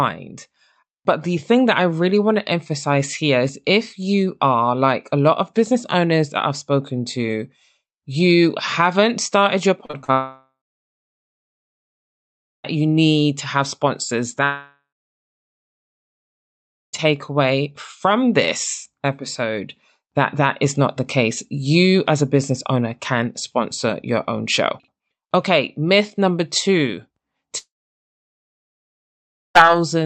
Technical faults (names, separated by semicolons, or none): repeated packet loss (robotic sound); long network dropout